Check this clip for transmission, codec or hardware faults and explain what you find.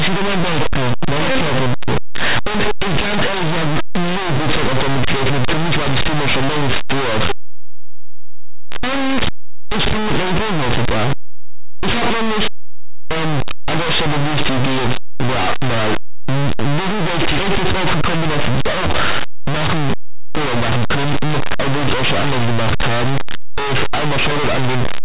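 One fault runs through the whole speech clip: linear audio read as companded. Plain 8-bit samples were decoded as mu-law, so values just on one side of zero become huge outputs while those on the other side stay small, producing very loud, harsh distortion, unlike clipping, which only damages loud passages.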